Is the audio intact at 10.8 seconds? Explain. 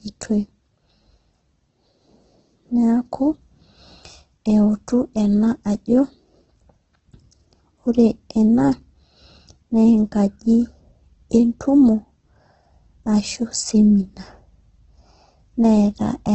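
No, heavy Opus compression at a low bitrate, likely, spans the whole clip; starved bands get noise-filled, so the speech sounds grainy and rough, with nothing above 8.3 kHz.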